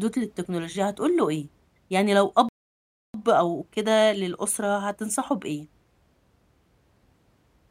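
At 2.49 s the speech cuts out abruptly and the output stays silent until 3.14 s, a gap of about 660 ms, before continuing. This is a playback stall: the player likely ran short of buffered data or had its audio thread blocked, so nothing reached the output until it caught up. It sounds like the audio freezing mid-flow rather than a natural pause, with a hard stop and an equally abrupt restart.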